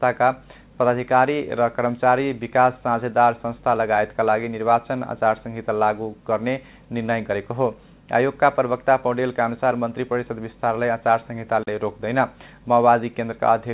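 Nothing stood out on listening; the sound comes through a call path whose G.711 mu-law coding at 64 kbps leaves nothing above 4 kHz.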